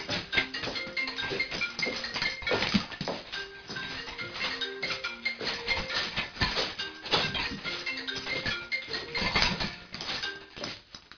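From start to end, aliasing: high content folds back below 5.5 kHz, fitting an unfiltered drop to 11 kHz, sounding gritty and metallic, nearly as loud as the real sound rather than dull.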